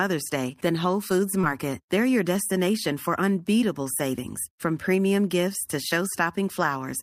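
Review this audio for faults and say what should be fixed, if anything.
Short concealed packet loss at 1.41–1.45 s: about 20 ms of the speech arrived too late, so the decoder extended the preceding sound, producing a brief smear. Forward error correction or a slightly deeper jitter buffer would let the receiver recover the missing packet instead of concealing the gap.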